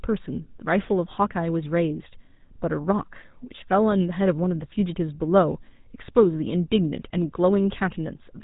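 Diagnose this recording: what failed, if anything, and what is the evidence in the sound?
The failure is at the codec stage: GSM full-rate coding runs through the whole recording, with plainly audible buzzy, gravelly roughness on the speech and no content above 4 kHz. A vocal-tract model excited by sparse regular pulses produces this, which fits a 13 kbps GSM full-rate encode.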